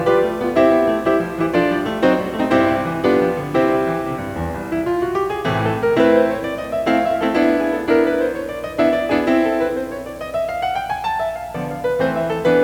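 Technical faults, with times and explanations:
Throughout: video or display buzz, a 60 Hz field-rate buzz with hash above it, well below the music, from a screen or video cable coupling in, unlike plain mains hum.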